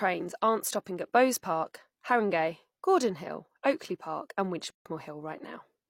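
A speech recording with a gap at a join of encoded pieces. Between 4.70 and 4.86 s the sound drops out for 152 ms. The edges are smeared. Then the speech resumes where it stopped. Separately encoded pieces were joined untrimmed, leaving encoder delay and end padding as silence.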